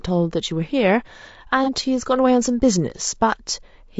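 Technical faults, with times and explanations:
Throughout: low-delay AAC compression. The speech sounds rough and grainy, with noise between harmonics, likely from AAC-ELD's short frames at something like 32 kbps.
1.64 to 1.69 s: AAC frame loss with concealment. About 30 ms went missing, fitting one lost frame, and the decoder's guessed fill leaves a brief smeared, noisy patch.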